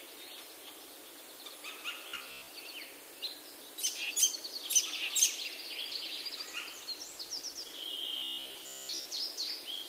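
From 2.09 to 2.48 s the sound turns into a rigid, metallic buzz near 66.8 Hz, and it returns from 8.17 to 9.06 s. This is robotic sound from repeated short buffers. The likely cause is audio arriving too seldom, so the software loops a slice of roughly 15 ms. Most of the real audio in those spans is skipped.

From 5.91 to 7.91 s the audio becomes rough and coarse. This is a call bitrate drop: the encoder's rate fell from 32 kbps to 15 kbps and stayed at that floor for about 1.9 s. With fewer bits, each moment is coded more crudely.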